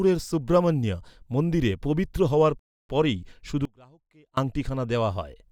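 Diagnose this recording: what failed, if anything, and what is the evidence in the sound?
A rebuffering stall at 2.59 to 2.89 s: the speech stops dead into silence, then resumes exactly where it left off, adding about 0.3 s with nothing missing. This is a playback-buffer fault, where the player's buffer ran dry while waiting for network data.

An audio dropout to a faint residue runs from 3.65 to 4.37 s: the speech cuts abruptly, and for 0.72 s only a faint trace about 30 dB below normal remains before it snaps back. The likely cause is a momentary break in the analogue wiring with the path downstream still live.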